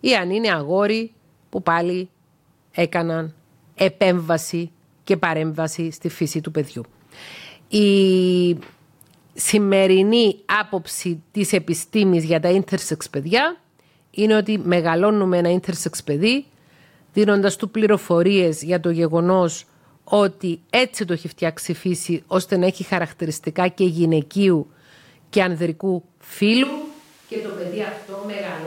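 From 26.65 s onward, likely a switch to a distant microphone: hollow, roomy speech, waveform about 10 dB smaller, spectrogram losing bass, noise raised.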